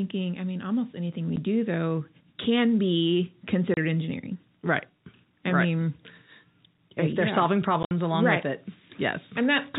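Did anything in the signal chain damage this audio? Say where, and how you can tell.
Yes, at the network stage: packet loss filled with silence. Hard-edged gaps cut in at 1.36 s after "mean almost anything we", at 3.74–3.77 s, and at 7.83–7.91 s before "along right with it". The gap lengths, 10, 30 and up to 60 ms, fit lost 10 ms packets replaced by silence. The 4 kHz telephone band from the G.711 coding can be heard.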